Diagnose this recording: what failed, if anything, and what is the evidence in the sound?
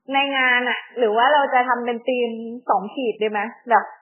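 MP3 compression throughout, codec stage: nothing above 3.1 kHz and heavy watery swirl, likely a bit-starved encoder (fits 8 kbps) cutting treble and dropping weak lines.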